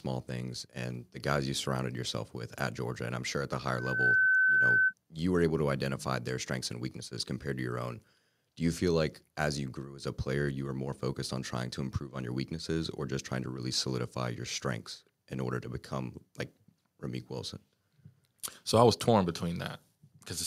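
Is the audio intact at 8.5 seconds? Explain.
Yes, at 8.5 seconds the speech plays through with no dropout, click, distortion or other fault.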